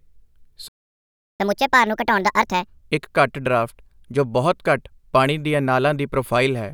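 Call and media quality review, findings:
Playback stall, 0.68–1.40 s: speech cuts out mid-flow for about 0.71 s, then resumes. Waveform shows a flat near-silent gap; spectrogram a blank vertical band. Likely player buffer underrun or blocked audio thread starving output until recovery.

Catch-up at higher speed, 1.40–2.83 s: speech runs at 1.5x speed with pitch raised by about seven semitones. Resampling playback of the backlog to recover lost time. Spectrogram: harmonics shifted upward, syllables compressed in time.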